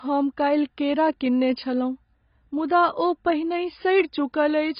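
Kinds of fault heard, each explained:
AAC compression: throughout, the speech sounds dull and smeared, with nothing above 5.1 kHz, heavy codec damage and warbling, likely from AAC-LC coding at a very low bitrate near 16 kbps, which cuts the top band and starves the remaining frequency lines of bits.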